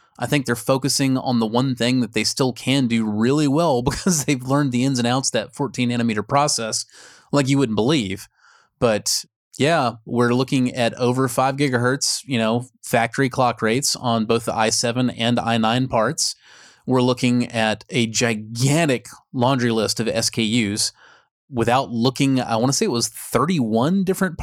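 No technical faults can be heard anywhere in the recording. There is nothing in the audio that needs a timestamp or an explanation.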